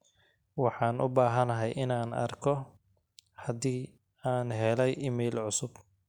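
No technical faults can be heard anywhere in the speech, and the signal stays intact throughout.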